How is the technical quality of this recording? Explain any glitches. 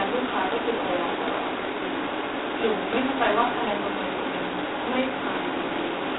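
Pretty rough, honestly. The whole clip sits inside a narrow telephone band and carries heavy coding grit from start to finish.

That's G.726 ADPCM all the way through. Instead of storing each sample, the codec sends a tiny correction to a running prediction. With so few bits per sample, those corrections are coarse, so quantisation noise rides right on top of the speech and gets louder as the voice does. You hear a harsh, rasping hiss, which fits the 16 kbit/s mode. The sound runs from about 300 Hz to 3.7 kHz, and nothing comes through above 3.9 kHz, so it's thin and muffled too.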